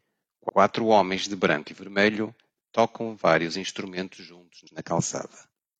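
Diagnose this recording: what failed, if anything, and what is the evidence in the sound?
The speech stutters twice, replaying the same 85 ms: at 0.45–0.53 s, before "homens de branco e", and at 4.63–4.72 s, after "tocam vários instrumentos juntos". These are repeated frames at the codec or storage stage. A block consistent with two compressed frames was written twice, and each stutter adds 85 ms.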